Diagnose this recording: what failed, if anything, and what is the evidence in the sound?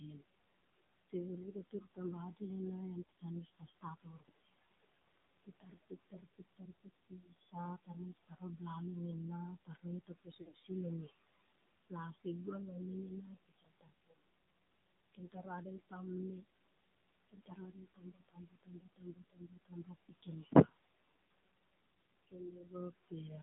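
Call processing: this is noise suppressor artifacts. The room noise, sitting about 14 dB under the speech, gets pulled down by about 19 dB in the gaps and swells back under the talking.

Codec: the AMR narrowband mobile codec is clearly audible throughout. The band stops at about 150 Hz to 3.7 kHz, and the voice has that buzzy, synthetic edge. That fits a low AMR-NB mode of around 7.4 kbps, where there are only a few pulses per subframe to model the voice.

Call processing again: there are spots where speech was cut by the noise suppressor. It mistook quieter bits of speech for noise and ducked them by about 13 to 19 dB, at 1.1–2.41 s (ending just before "ena en"), 3.05–4.71 s (just after "ena en"), 5.44–8.6 s, 15.07–16.44 s, 17.29–20.74 s and 22.05–23.12 s. The 17.29 s stretch loses the most, a couple of seconds in total.

Network: at 10.42–10.60 s there are lost AMR speech frames. The sound warbles and dips as the decoder repeats its last good settings at falling gain. 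About 140 ms is concealed across 200 ms, with the longest gap around 60 ms. That points to roughly seven dropped frames.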